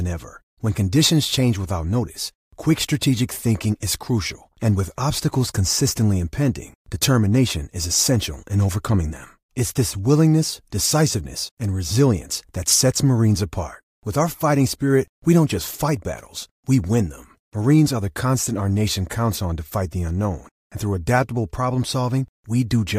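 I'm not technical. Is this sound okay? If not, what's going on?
Yes, this sound is okay; there's nothing wrong going on with it.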